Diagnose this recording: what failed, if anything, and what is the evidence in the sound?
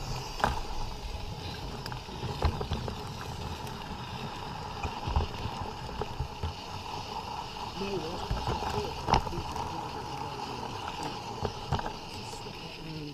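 The codec stage most likely failed, through a broken MP3 bit reservoir. At 4.82–4.85 s and 8.19–8.22 s the sound is briefly disrupted for about 30 ms and resumes slightly further on. Each disruption spans roughly one 26.1 ms frame. On a spectrogram each shows as a narrow vertical band that breaks the surrounding pattern, and the waveform is discontinuous at its edges. Frames appear to have been lost, so the next frame reached back into the reservoir and decoded bytes belonging to another frame.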